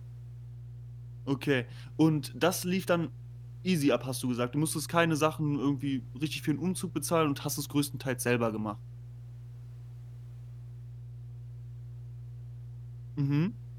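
Mains hum runs throughout the speech, a steady 60 Hz tone with some low harmonics sitting only moderately below the voice level. Power-line current is leaking into the signal path, likely through a ground loop or a nearby transformer, producing a constant buzzing drone.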